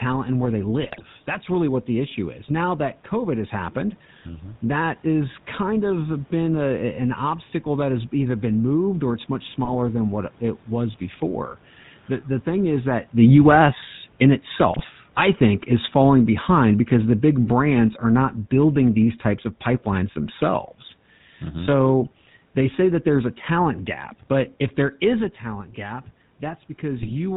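Throughout, the speech carries the gravelly, buzzy texture of the GSM full-rate codec, consistent with its 13 kbps coding. It rebuilds the voice from a vocal-tract filter excited by sparse regular pulses, and nothing survives above 4 kHz, so the sound is dull and rough.

GSM bit errors break through at 0.82–1.05 s, 9.64–9.75 s, 14.72–14.85 s and 26.98–27.11 s. Corrupted filter, pitch or gain parameters reach the decoder, distorting the spectrum or level frame after frame while each bad patch lasts and producing short squawks, pops and gargling.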